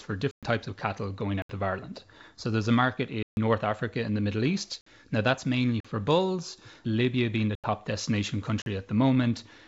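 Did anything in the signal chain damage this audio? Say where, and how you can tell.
Yes. The speech drops into dead, hard-edged holes at 0.31–0.43 s (just before "types of cattle"), 1.42–1.49, 3.23–3.37, 4.81–4.86, 5.80–5.85 (after "that's mainly"), 7.55–7.64 (after "being the") and 8.62–8.66 s. These are blocks of digital silence from a driver or buffer stage that missed its deadlines. The 43 ms and 85 ms gaps fit whole 2048- and 4096-sample blocks. Above them, the G.722 coding's top end stops near 7.7 kHz.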